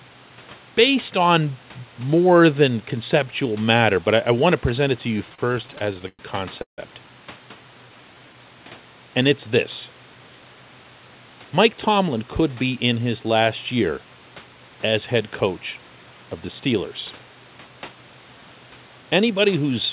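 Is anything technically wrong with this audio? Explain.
Yes, there are three timing faults close together.

From 5.18 to 6.21 s there are repeated stalls (stutter): packets arrived late, the jitter buffer kept running dry, and fifteen little gaps got filled in, the longest 107 ms, so the audio drags and hiccups.

At 6.62 to 6.80 s there's a call audio freeze: the sound holds, then drops to about 120 ms of silence before resuming. That's likely packets being held up on the way, which added 157 ms of delay.

From 7.66 to 8.34 s a jitter buffer slow-down repeats pitch periods to rebuild its reserve, so the audio plays at 86% speed at the same pitch and sounds drawn out by about 98 ms.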